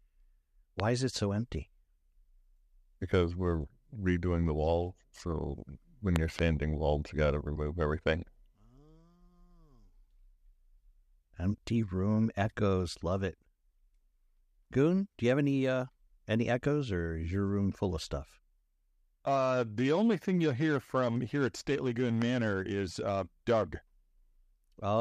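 A loud pop lands at 0.80 s in the speech, about 15 dB above the surrounding level. A double pop follows between 6.16 and 6.41 s, peaking near 20 dB above the signal, and a weaker single pop comes at 22.22 s, about 10 dB up. Each is a sharp, brief thump over the speech, which continues beneath it. The likely cause is a voltage step or spike from a connector, switch, static discharge or driver glitch entering the signal chain.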